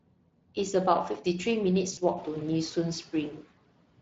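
A hoarse, grainy roughness runs through the whole of this short speech clip, with the voice texture smeared and noisy rather than clean. This is the Speex codec at a clearly audible level of damage, consistent with a bitrate of around 20 kbps, where the CELP coder has too few bits to model the excitation faithfully and replaces fine detail with noise-like approximation. Near the start, from 0.04 to 0.57 s, parts of the speech sound swallowed and faint, dipping by about 19 dB for roughly a fifth of a second in total. The same happens again from 3.37 s to the end at 4.01 s, this time over roughly a third of a second. Both are speech cut by the noise suppressor: it judged soft consonants or quiet stretches to be background and turned them down along with the noise. Between 1.93 and 2.00 s the voice briefly turns stretched and fades, and stays weak for a moment afterwards. This is VoIP packet loss concealed by the speech codec, and the gap fits two lost 20 ms frames. 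The decoder kept extrapolating from the last pitch and filter while lowering the gain, and because each frame builds on the previous one, the weakness persists after packets resume. Around 2 s the room noise rises by about 20 dB, settling about 21 dB below the speech.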